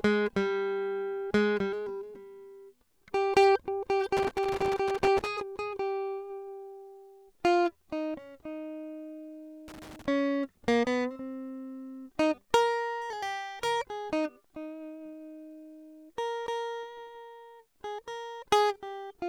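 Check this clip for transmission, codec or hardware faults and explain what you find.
Loose connector crackle interrupts the music from 4.17 to 5.27 s and 9.68 to 10.06 s: a worn contact intermittently breaks the signal, producing irregular scratchy bursts.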